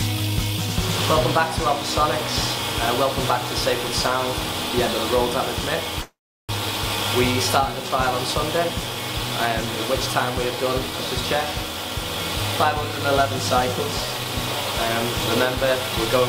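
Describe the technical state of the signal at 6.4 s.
At 6.4 s the signal sits inside a long network dropout running from about 6.01 to 6.53 s. The audio stream most likely stopped arriving: the last sound is stretched into a fading buzz, then about 360 ms of near-silence, with 400 ms of material never played. Unlike a brief packet loss, where concealment bridges a few milliseconds smoothly, this gap decays to nothing, and the audio resumes roughly 70 ms later than before.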